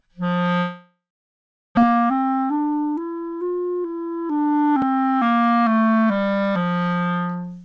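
From 0.58 s to 1.79 s there is a long network dropout, most likely from packets that stopped arriving. The receiver first extends the last sound as a decaying buzzy hiss, then leaves about 740 ms of silence. About a second of the sound is gone when playback resumes. On a waveform this is a tapering tail followed by a flat line. On a spectrogram, smeared repeated bands fade into an empty column, and the sound resumes abruptly with the lost material skipped.

From 1.86 s to 3.61 s comes a jitter buffer speed-up. The receiver had built up extra delay after the gap, around 150 ms, and trims it by repeatedly cutting out pitch-period-length slivers. Playback runs at 110% speed with pitch unchanged, removing roughly 200 ms in total, so the sound feels rushed. A spectrogram shows events spaced closer together without any upward shift in frequency. The waveform shows splice points at intervals.

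At 4.82 s there is a block of digital silence lasting 2.9 ms, which fits a 128-sample buffer that was never filled. The signal drops straight out and jumps back with no fade. This produces a sharp tick rather than a noticeable hole. On the waveform it appears as a tiny near-flat notch with vertical edges. The spectrogram shows a thin broadband vertical line at each edge, reaching up to the 8 kHz ceiling left by the G.722 call codec.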